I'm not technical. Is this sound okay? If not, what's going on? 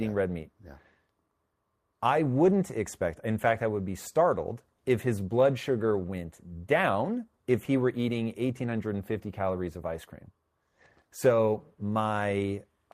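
No. Around 2.45 to 2.55 s, just before "expect in fact I", there's a lost packet rebuilt from error correction. A few pieces of the call went missing and were filled in with rougher backup copies, so that moment sounds briefly grainy and noisy rather than dropping out to silence.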